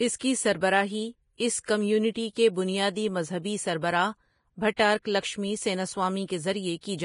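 Throughout, the speech is hissy and grainy with nothing above 10.6 kHz, likely Vorbis compression at a heavy setting around 29 kbps; unlike MP3 smearing, the treble turns into noise. Pre-echo appears at 1.37 to 1.40 s, 1.59 to 1.64 s and 4.76 to 4.79 s: a brief hiss of roughly 23 to 55 ms runs ahead of sharp attacks, spread there by the block transform, not a true echo trailing them.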